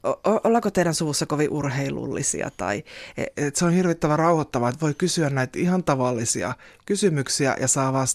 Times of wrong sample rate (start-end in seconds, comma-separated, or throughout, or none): 3.34-8.14